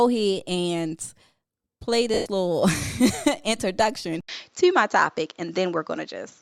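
From 2.14 to 2.26 s, about 120 ms of speech is replaced by lost LE Audio frames. That fits roughly a dozen 10 ms LC3 frames dropping out. The decoder keeps repeating the last spectrum with scrambled phase. The speech smears into a noisy blur, then fades toward silence.

At 4.21 s there is a gap of about 80 ms. Then the sound changes until the end. Nothing remains above 7.6 kHz, so it turns duller. The level shifts a little, and a faint new background noise appears. This is likely the input switched to a poorer device.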